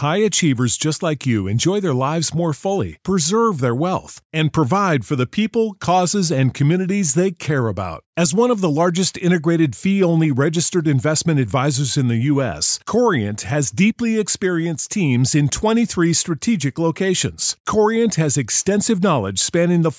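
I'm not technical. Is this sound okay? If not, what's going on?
Yes, this speech recording is okay, with nothing wrong to point to. At no moment does anything break up or go amiss.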